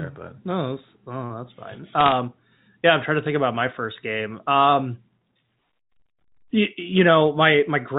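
A short burst of sharp ticking crackle breaks into the speech from 2.00 to 2.17 s, right after "that's oh that's fine". These are bit errors on a digital phone line: roughly half a percent of bits flipped, each corrupting a single sample. The speech comes through a G.711 telephone channel, which caps the band at 4 kHz.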